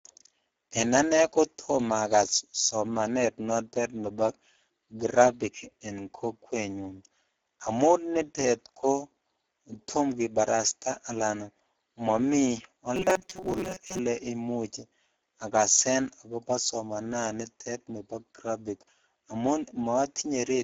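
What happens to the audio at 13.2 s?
Around there the speech picks up a rigid metallic buzz, from about 12.96 to 13.99 s: robotic sound from repeated short buffers. It's likely the player running short of fresh audio and looping roughly 5 ms chunks, so about half the real signal gets skipped and the loop imposes a steady 188 Hz pitch.

Underneath that, the Speex codec is at work for the whole clip at about 9.8 kbps. Its damage is plainly audible, with a hoarse, noisy roughness, and anything above 8 kHz is only a shaped, noise-like fill, which takes the top off the sound.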